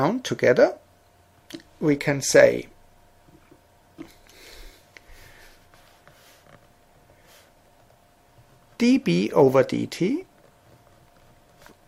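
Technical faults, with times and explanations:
No technical faults can be heard anywhere in it.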